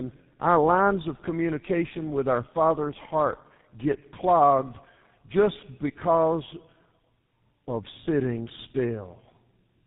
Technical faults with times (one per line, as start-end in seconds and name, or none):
0.00-9.87 tandem speech coding